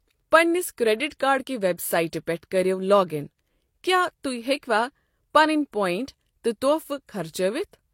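From start to finish the speech carries layered coding artefacts that point to transcoding between lossy codecs, likely a Vorbis pass near 60 kbit/s followed by HE-AAC near 32 kbit/s. The second encoder spends its scarce bits re-coding the first one's smearing while adding its own swirly, metallic texture, so both kinds of roughness sit together. A spectrogram shows a hard ceiling at about 16.3 kHz, with blotchy, patchy energy below it.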